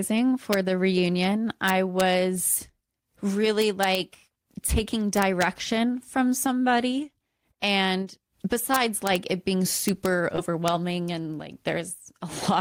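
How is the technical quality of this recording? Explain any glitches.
Integer overflow is the problem here, and it hits the speech six times: a single crack at 0.53 s, then longer bursts from 1.68 to 2.01 s, 3.62 to 3.95 s, 8.74 to 9.16 s and 9.88 to 10.06 s, and a last crack at 10.68 s. The signal is pushed only about 0 to 1 dB past full scale, but instead of being limited the samples wrap around to the opposite sign. You hear violent, harsh snaps on the loud peaks, much nastier than ordinary clipping.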